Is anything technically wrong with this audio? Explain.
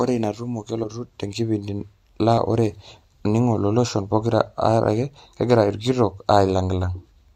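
Yes. At about 0.83 to 0.87 s, compressed frames are skipped. Roughly one frame goes missing, so the speech jumps ahead by about 20 ms. The frame was missing from the file or refused by the decoder as damaged. It sounds like a sudden jump in the speech.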